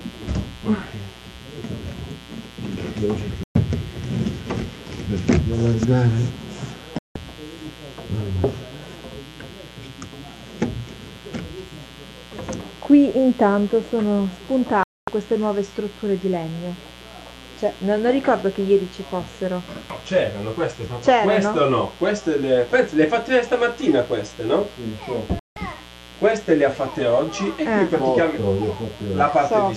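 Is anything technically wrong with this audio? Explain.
Yes, there are two faults.

Mains buzz runs through the whole clip. Sharp switching spikes from the 60 Hz supply, occurring twice per cycle, have leaked into the signal path, probably through a dimmer, a rectifier or a missing shield. The spikes carry harmonics well up into the kilohertz range. The result is a steady, raspy buzz sitting around 20 dB below the programme. On a spectrogram it shows as evenly spaced horizontal lines stacked from 60 Hz upward across the whole clip.

Digital broadcast dropouts occur four times: 3.43–3.56 s, 6.99–7.16 s, 14.83–15.08 s and 25.39–25.57 s. Each time, the receiver stopped getting decodable frames and muted until good ones returned, so whatever was transmitted in those gaps is gone. The gap lengths fit whole frames of roughly 24 ms being discarded. Each is heard as an abrupt hole in the sound lasting 0.12 to 0.25 s. 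The waveform shows flat silent stretches, and the spectrogram shows blank vertical bands.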